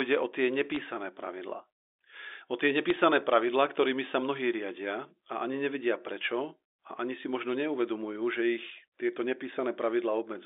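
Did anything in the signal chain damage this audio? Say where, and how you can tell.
Yes. At the network stage, bit errors on a digital phone line cause sharp ticks at 0.72–0.76 s, just after "o tie", and a sparser burst at 2.90–2.95 s. Each flipped bit corrupts one mu-law sample, and hits on sign or high-order bits produce the clicks.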